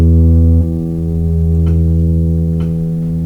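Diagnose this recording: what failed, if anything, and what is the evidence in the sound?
Network and jitter buffer stage: there's a skip ahead at about 0.61 s in the music, where roughly 0.7 s of material just vanishes and playback jumps straight on with no gap. That suggests the buffer overflowed and discarded a stretch while later audio was queued, then butted the edges together.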